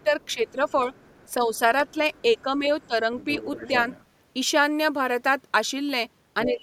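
A speech clip with echo-canceller trouble right at both ends. From 0.02 to 4.04 s the other side's voice leaks through, sitting roughly 20 dB below the talker, and it pops up again from 6.43 to 6.51 s at about 15 dB down. That's likely the far end coming out of the loudspeaker and not being fully cancelled before the mic picks it up. Meanwhile, across 0.00 to 3.07 s the talker's speech gets suppressed in double talk, adding up to about a second of dips around 10 dB deep, and again from 6.45 s to the end with a drop of about 15 dB. That's likely the canceller getting confused when both people talk at once and pulling everything down. There's also a single sharp click at 1.80 s from dropped samples. It's a tiny jump in the waveform, which fits a handful of samples going missing, far too short to eat any actual sound.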